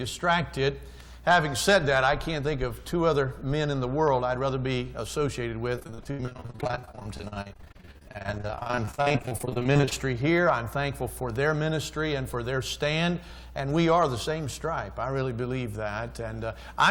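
At 1.00 s a sharp snap sits on top of the sound. It is an electrical switching spike. A nearby switch, motor or static discharge likely arced, and the audio line picked up the burst.

From 5.75 to 9.93 s the sound turns choppy and robotic. This is repeated packet loss. Many short holes follow one another, the longest 78 ms. Each is patched by stretching the last sound. About 44% of the stretch is patched this way.

At 11.36 s the same switching snap returns.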